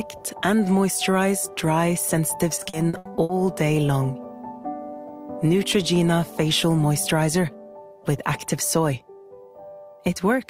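From 2.55 to 3.31 s, repeated packet loss (robotic sound): seven gaps, longest 80 ms, patched by extending prior audio, giving choppy stutter with pieces missing rather than one clean dropout.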